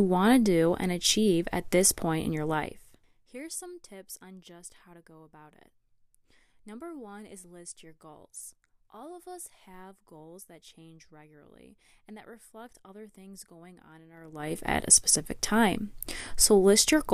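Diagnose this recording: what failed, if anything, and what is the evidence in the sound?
Zipper noise at 2.51 to 3.30 s, after "this point in your", and 14.12 to 14.58 s, before "at a specific time": gain stages apply unsmoothed 2 dB steps per buffer, roughly 15 then 30 per second, ticking through a fall and rise of about 25 dB.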